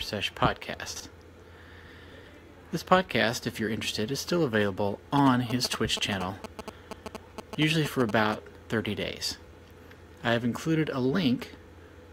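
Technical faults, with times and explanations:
0.88–1.00 s and 2.12–2.28 s, chunks out of order: a 40 ms block of audio arrived or was written late and plays two, then three, chunks after its proper place. Nothing is missing, but each reordering leaves three hard joins, heard as a brief jumbled stretch.
5.18–8.34 s, GSM signalling bursts: a nearby 2G phone transmitting short groups of radio bursts while signalling is picked up and rectified by the audio circuit. The result is a galloping dit-dit-dit of brief 217 Hz buzzes, loud and only a few decibels below the wanted sound.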